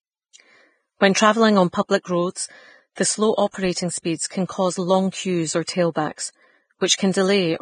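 Vorbis compression runs throughout the speech, likely the cause of its hissy, grainy treble. Nothing survives above 9.7 kHz, and the high band is quantised so coarsely that detail turns to noise, roughening tones and blurring attacks, which fits a bitrate around 21 kbps.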